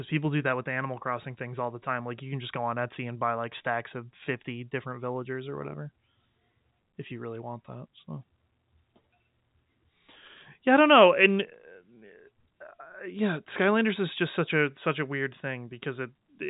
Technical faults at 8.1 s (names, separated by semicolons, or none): none